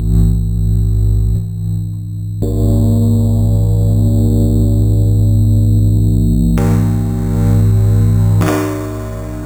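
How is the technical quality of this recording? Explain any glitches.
The recording has one continuous fault, imaging from sample-and-hold upsampling, present for the whole clip. The rate was raised, apparently from 8 kHz to 48 kHz, by repeating each sample without smoothing, so mirrored copies of the spectrum sit about 29 dB down. The lowest copy fills 4 to 8 kHz as a metallic fizz. Unlike steady hiss, its level rises and falls with the sound, and its pitch moves opposite to the original.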